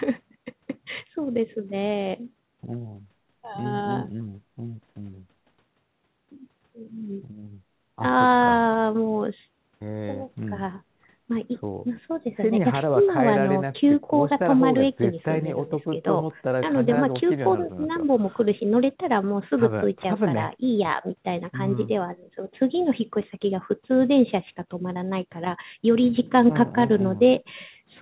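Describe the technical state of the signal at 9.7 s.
At 9.7 s the speech is intact, with no dropout, glitch or distortion, only the narrow band up to about 4 kHz that a G.711 mu-law call codec normally leaves.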